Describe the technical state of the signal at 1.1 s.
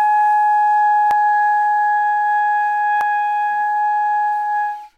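At 1.11 s the sound skips forward, with about a tenth of a second missing and the two sides butted straight together. This is likely audio missing between chunks, lost at a roughly 2-second block boundary. Unlike a dropout, no silent gap is left.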